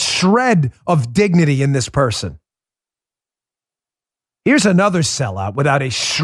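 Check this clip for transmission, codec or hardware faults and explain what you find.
No faults turn up on checking this clip.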